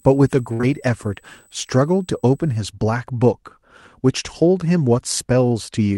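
Speech carries a USB whine from 0.0 to 2.59 s: a fixed 8 kHz tone, strongest at 16 kHz and about 35 dB down, drawn as thin horizontal spectrogram lines from USB bus current leaking into the audio. A burst of packet loss at 0.53 to 0.61 s replaces about 60 ms with a stretched, fading continuation, a smooth decaying patch in the waveform before the audio jumps ahead. Short concealed packet loss follows immediately at 0.61 to 0.65 s, where roughly 20 ms is bridged by synthesized sound, showing as a brief smeared band before the real signal blends back.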